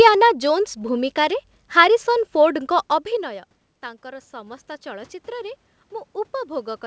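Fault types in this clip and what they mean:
Automatic gain rising: after "ଜୋନ୍ସ ଭୂମିକାରେ ହାରିସନ୍" the speech drops sharply as the talker moves away, and from 2.55 s to 5.62 s the gain control slowly lifts the level by about 5 dB, making up only part of a fall of about 18 dB. Unlike a talker leaning back in, this swell is gradual over about three seconds, and the room noise rises along with the voice.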